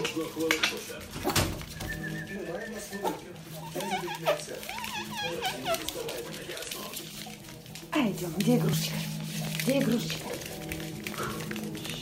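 A train of clicks runs from 9.47 to 11.95 s: about ten similar pulses, roughly three per second at uneven spacing, peaking well above the sound, likely from interference.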